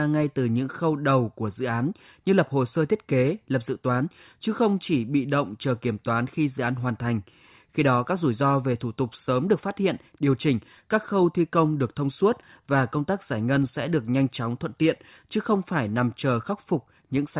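No technical faults can be heard anywhere in the recording.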